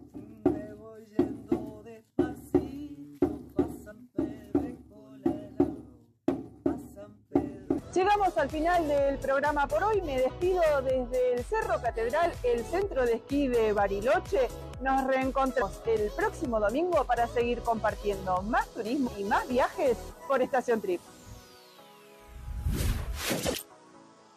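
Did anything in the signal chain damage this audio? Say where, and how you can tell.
Yes. The damage is at the codec or storage stage: compressed frames skipped at about 3.90 s, 15.61 s and 19.07 s. Each time the audio jumps ahead, losing roughly 70 ms at the first point and about a fifth of a second at the other two. These jumps are whole multiples of a 23.2 ms frame, which fits a 1024-sample codec frame at 44.1 kHz. A waveform shows an abrupt discontinuity in the envelope at each point, and a spectrogram shows a vertical smear where the content before and after fails to line up.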